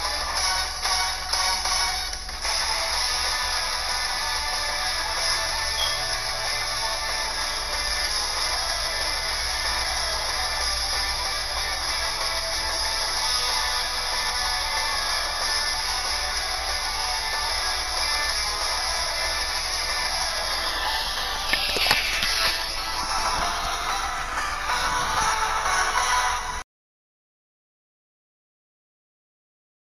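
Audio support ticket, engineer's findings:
No faults found on playback.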